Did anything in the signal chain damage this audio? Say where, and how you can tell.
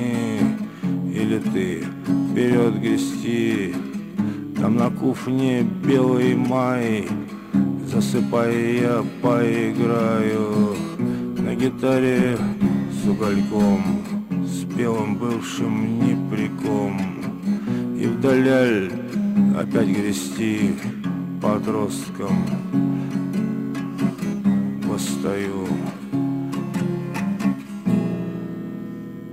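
Yes, a call bitrate drop from 11.06 to 13.85 s, at the codec stage driven by the network. The sound turns coarse and loses its top end, consistent with the encoder falling from roughly 96 to 28 kbps after a lowered bandwidth estimate, then recovering.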